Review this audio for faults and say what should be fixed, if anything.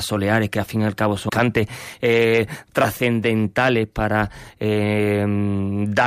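A skip ahead occurs at about 1.3 s, right after "fin y al cabo". Roughly a third of a second of speech is missing. Nothing fills the gap. The two sides join almost directly, so the speech lurches forward. This points to a stretch of audio dropped in transit or discarded when the jitter buffer overflowed while later audio was already queued. To prevent it, size the jitter buffer for the network's burst arrivals and use concealment rather than discarding queued audio.

A jitter buffer speed-up runs from 1.85 s to 2.18 s, just before "trascendentales para". The speech plays at about 111% speed with no pitch change. It sounds hurried. The receiver held more audio than its target. It trimmed short pitch-period pieces repeatedly, removing a few tens of milliseconds in total. To prevent it, let the buffer shrink more gradually, spreading the time compression over longer stretches or pauses.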